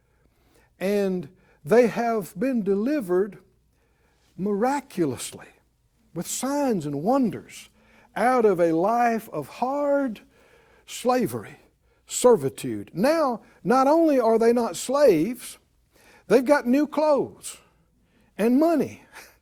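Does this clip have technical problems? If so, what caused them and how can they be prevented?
No, nothing in this speech recording sounds like a technical problem, so there's nothing here that needs preventing.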